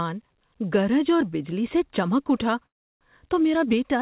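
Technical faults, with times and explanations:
2.66–3.03 s, call audio freeze: Packets were most likely held up in transit, so the jitter buffer ran dry right after "بجلی سے چمک اٹھا". The receiver carried the last sound forward as a brief fading fill, which drops into about 0.33 s of near-silence. When the audio resumes, it picks up where it stopped, with nothing lost, just delayed by 0.35 s. This happens on a narrowband path with nothing above 4 kHz, consistent with G.711 A-law at 64 kbps.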